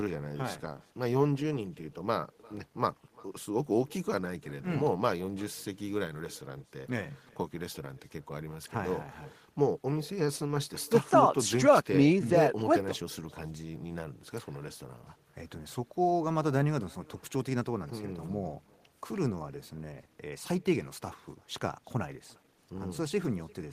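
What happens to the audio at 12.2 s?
At 12.2 s the speech is being shadowed by echo with no canceller, the same as it is for the whole clip. The far end is playing the call through a loudspeaker, and its mic picks that up and sends it straight back. You hear each phrase again about 0.4 s later, roughly 25 dB down, as a faint, thin copy trailing behind the original.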